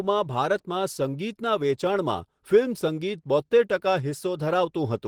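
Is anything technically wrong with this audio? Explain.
Yes. The speech carries Opus voice compression for its full length, and the damage is plainly audible. The low band is coded by SILK's linear-prediction model and the top by a coarse CELT layer above 8 kHz, so the voice sounds hoarse and slightly robotic. That fits a bitrate around 16 kbps. Plain low-pass filtering would sound muffled, but here content still reaches about 20.2 kHz, so the fault is coarse coding rather than a narrowed band.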